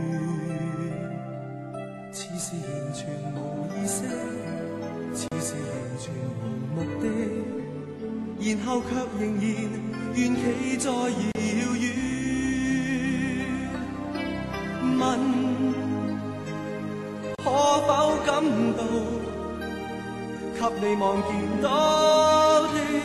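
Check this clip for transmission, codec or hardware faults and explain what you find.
Three short dropouts recur every 6 seconds: a gap at a join of encoded pieces at 5.28, 11.32 and 17.35 s. Each gap lasts about 35 ms. Separately encoded segments were joined untrimmed. Encoder start delay and end padding remain. The sound stops abruptly, smeared at the edges, then resumes where it left off.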